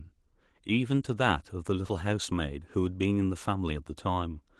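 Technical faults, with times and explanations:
No technical faults heard.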